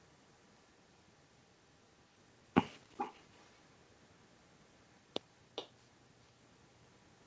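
From 2.97 to 3.58 s, and again briefly at 5.55 to 5.7 s, there's a faint delayed copy of the speech trailing the original by 416 ms, sitting roughly 15 dB down. That's echo leak, likely a loudspeaker-side echo canceller letting some pickup slip back.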